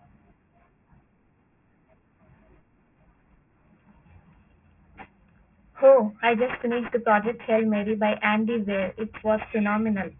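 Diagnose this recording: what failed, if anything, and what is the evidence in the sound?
Aliasing from sample-rate conversion throughout: sibilants sound gritty and metallic, folded about 3 kHz, consistent with an unfiltered drop to 6 kHz, aliases roughly 10 dB below signal.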